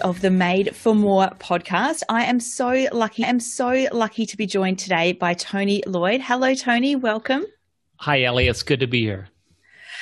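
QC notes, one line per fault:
3.22–4.22 s, stream segment repeated: after "I am so lucky", about 1.0 s of the programme plays a second time before "to be joined today", with a brief blip at the jump back, because the player fetched or queued the same segment twice.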